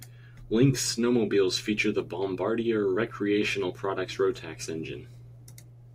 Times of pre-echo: none

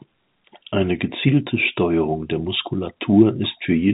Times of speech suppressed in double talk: none

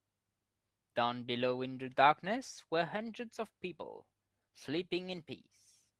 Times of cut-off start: none

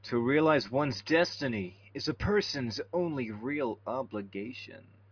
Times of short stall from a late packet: none

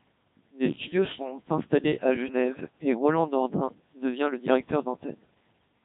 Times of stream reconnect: none

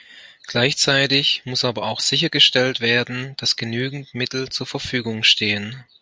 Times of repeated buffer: none

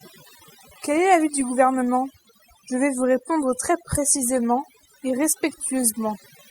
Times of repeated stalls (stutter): none

